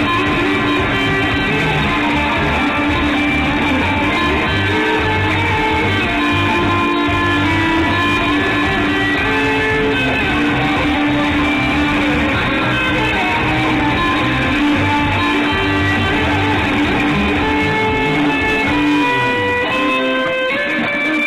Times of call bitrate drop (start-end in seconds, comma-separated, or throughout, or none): none